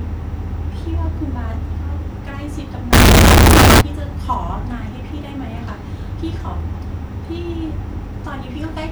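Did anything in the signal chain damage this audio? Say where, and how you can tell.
Yes. The damage sits at the sample-format conversion stage. From 2.93 to 3.81 s the speech turns into very loud, harsh distortion. Quiet moments become as loud as the rest. The likely cause is signed and unsigned mixed up, fitting 16-bit samples. Each zero crossing jumps across the full range.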